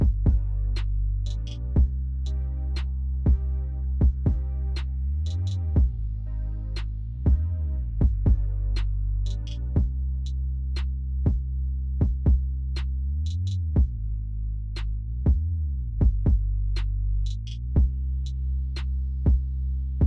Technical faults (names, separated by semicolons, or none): none